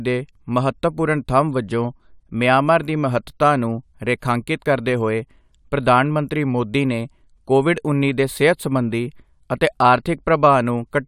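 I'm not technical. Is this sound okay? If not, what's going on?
Yes, nothing in this recording stood out as a problem when I listened to it.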